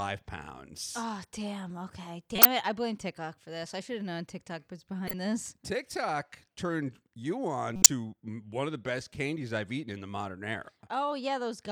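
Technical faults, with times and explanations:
2.35–2.45 s, 5.07–5.14 s, 7.76–7.86 s: corrupt frame decoded. Damaged frames were decoded anyway, so misread codes put energy at the wrong frequencies. The first burst comes just before "it I blame" and the third falls between "turned you on" and "one of the best". Each burst is a short glitch lasting a few frames and peaking near -5 dBFS, or about -15 dBFS at 5.1 s. On a spectrogram each shows as a brief block of stray energy.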